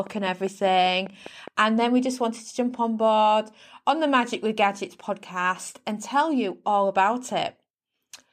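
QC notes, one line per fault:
0.07–1.49 s, train of clicks: about seven near-identical clicks at an even 4.96 per second, peaking about 5 dB above the speech. Likely interference from nearby equipment. The steady spacing and matching shape set it apart from random crackle or a single isolated click.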